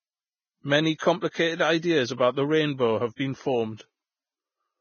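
From the start the whole clip has that hissy, grainy sheen of heavy lossy coding, most likely Vorbis compression at a low setting. The top end is simply gone, with nothing above about 6.6 kHz, and what treble survives is quantised so coarsely it turns into a fizzy noise rather than real detail. Voiced sounds come across roughened, and the overall damage fits a bitrate somewhere around 16 kbps.

At about 0.98 to 1.01 s there's a pre-echo, a short smear of hiss lasting roughly 26 ms that arrives just before a sharp attack in the speech. The codec spreads its quantisation noise across the whole transform block, so noise sized for the loud onset leaks into the quiet moment ahead of it. The attack ends up sounding soft and blurred instead of crisp.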